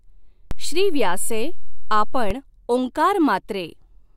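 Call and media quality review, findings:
DC step, 0.51 s to 2.31 s. Low thump at each edge as the zero line jumps about -14 dBFS, then returns. Probable converter recalibration or offset input. Speech unaffected.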